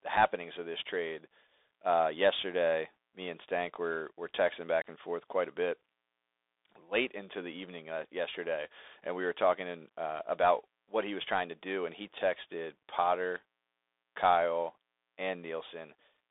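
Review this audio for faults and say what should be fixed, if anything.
Throughout, the speech carries Bluetooth CVSD headset codec damage. The band runs only from 300 Hz to 3.6 kHz, loud high-frequency sounds outrun the adaptive one-bit step and distort, sibilants turn scratchy, and a granular hiss sits underneath, consistent with a 64 kbps CVSD link. Record through a wired microphone, or set the headset to a wideband profile instead of the hands-free CVSD mode.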